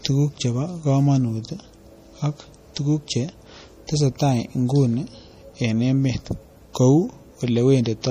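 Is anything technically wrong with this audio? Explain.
Yes. Throughout the speech there is MP3 compression damage, plainly audible, likely from a low-bitrate encode, roughly 40 kbps. Nothing is present above 15.1 kHz, where the encoder cut the treble, and weak frequency lines flicker between frames, giving a watery, swirly texture and smeared consonant attacks.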